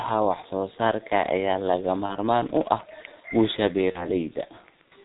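From the start, the speech carries the sound of the G.723.1 codec, heavily damaged. Nothing reaches above 4 kHz, so the voice is muffled, and the coarse, slowly updated vocal model leaves it hoarse, with consonants smeared together. The muffled, hoarse quality fits the codec's 6.3 kbit/s rate, where each 30 ms frame gets only about 190 bits to describe the spectrum and excitation.

At 2.06 to 2.16 s there is VoIP packet loss concealed by the speech codec. The decoder fills the gap by extending its last pitch and filter settings at falling gain, which turns the sound into a brief extrapolated sound that fades. Because every frame builds on the previous one, the disturbance runs to about 100 ms, which fits a single lost 30 ms frame. A second concealed loss at 3.92 to 4.07 s sounds the same and takes about 150 ms to recover.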